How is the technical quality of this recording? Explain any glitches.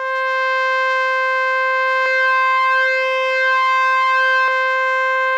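The music has one clear fault, a doubled audio track, from 2.06 to 4.48 s. A second, slower capture path or a misaligned edit likely mixed in another copy of the music, trailing by roughly 0.7 s and about 5 dB quieter. The copy is dry and full-band, so the passage sounds like an echo with no decay or room colour, and it cuts in and out abruptly at both ends.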